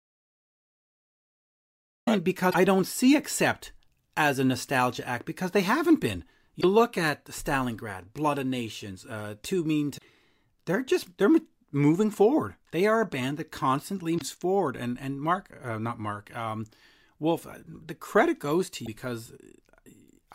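From the very start until 2.07 s the speech is absent and there is silence, with no room tone at all. That stretch is an audio dropout to silence already in progress when the clip begins. It is likely that the input was lost, through a disconnected source, a broken link or a mute, while the recorder kept writing silence. Whatever came before the speech resumes is simply missing.

Five short glitches then cut through the speech, each between 50 and 82 ms long: at 2.47 to 2.55 s, just before "don't see"; at 6.57 to 6.64 s, between "because they haven't been" and "look at"; at 9.94 to 10.02 s; at 14.15 to 14.22 s; and at 18.82 to 18.88 s, right after "the credit". These are damaged data in a compressed stream. Corrupted bytes made the decoder misread those frames, lose sync and hunt for the next valid header.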